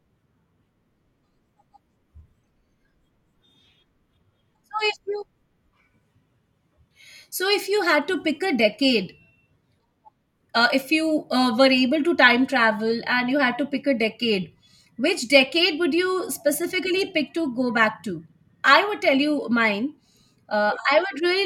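No technical faults are audible.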